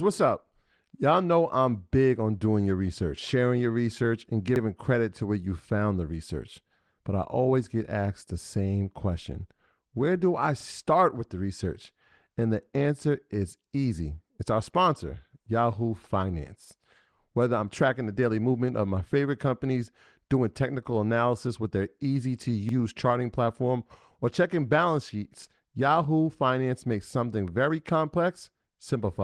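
Overlapping chunks stutter this speech recording at 4.56, 10.60, 16.65, 22.69 and 28.74 s, where each 6-second chunk begins 44 ms early, replaying that sliver at every join. The light Opus voice coding is audible only faintly.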